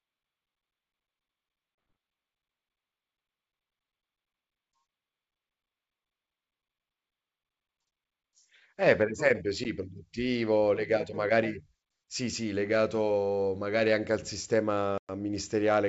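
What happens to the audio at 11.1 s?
Nothing goes wrong at 11.1 s: the speech there comes through intact, carried by 64 kbit/s G.722 wideband telephone coding with at most a faint trace of the codec's upper-band hiss.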